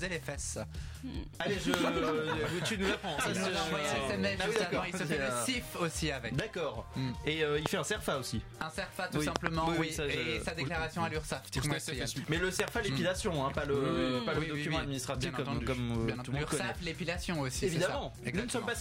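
Loud pops strike at 1.74, 4.56 and 7.66 s, with double pops at 9.36 to 9.49 s and 12.60 to 12.70 s, roughly 20 to 25 dB above the signal, likely voltage spikes from a switch, plug or static. Each is a sharp thump over continuing sound, seen as a tall waveform spike and a thin full-height vertical stripe on a spectrogram.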